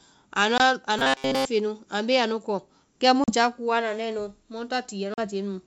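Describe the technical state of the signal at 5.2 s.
Packet loss on an ADPCM call runs from about 5.14 to 5.20 s, just after "anda nae nu mu". About 40 ms of the G.722 wideband speech, a couple of packets' worth, drops out as a hard-edged silence. The decoder's adaptive predictor and step size are left out of step with the sender's, so at 5.2 s the speech comes back with brief, slight distortion, settling within tens of milliseconds.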